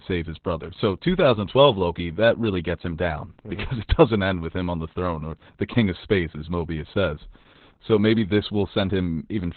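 Heavy Opus voice compression runs through the whole of this speech clip. The coder is working in its SILK linear-prediction mode at a bitrate low enough, something like 8 kbps, that it has dropped to narrowband and keeps nothing above 4 kHz, while coding the excitation only coarsely. The voice therefore sounds muffled and boxy, with no sibilant crispness, and carries a hoarse, slightly robotic roughness from start to finish.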